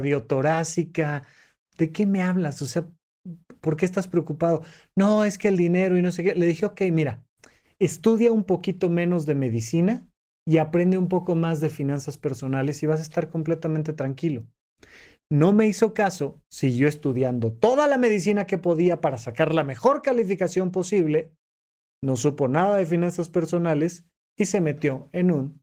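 The speech carries no technical faults, with its Opus voice coding running at about 20 kbps in fullband hybrid mode and leaving only light traces of compression.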